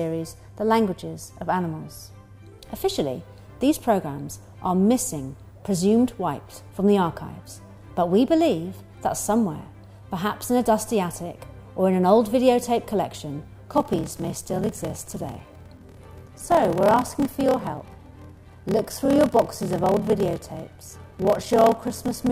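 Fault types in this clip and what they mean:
block size mismatch (padded): From 13.7 s to the end, one stage hands over shorter blocks than the next stage reads and fills the remainder of each block with zeros, opening a brief gap every block. The result is a steady buzz at about 38.3 Hz and audio that plays at 0.889 times its original speed with timbre essentially unchanged. This fits 1024-sample blocks being read as roughly 1152-sample blocks.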